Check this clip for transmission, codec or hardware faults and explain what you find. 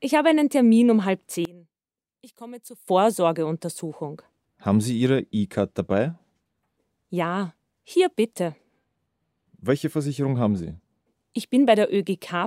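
One fault stands out, a brief collapse in level. From 1.45 to 2.88 s the sound drops by about 22 dB, leaving a faint residue. The likely cause is one channel inverted: with one stereo channel's polarity reversed, everything common to both cancels when summed to mono, so only the small inter-channel difference survives.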